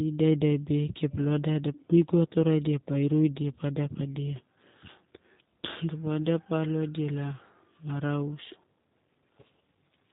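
G.729 codec damage runs throughout this speech clip, from start to finish, and it is plainly audible. The speech has been rebuilt from a vocal tract filter, a pitch predictor and a few pulses per 10 ms frame rather than carried as a waveform, giving it a rough, synthetic quality. Nothing above 4 kHz survives, and the sound fits the 8 kbit/s G.729A variant of the codec.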